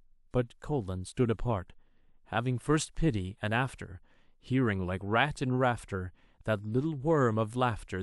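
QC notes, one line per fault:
No faults heard in this speech clip.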